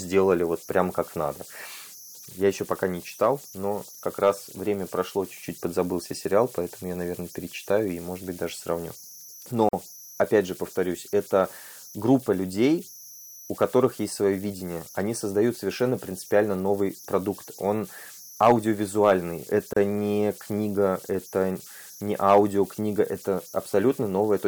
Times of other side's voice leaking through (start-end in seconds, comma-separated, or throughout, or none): none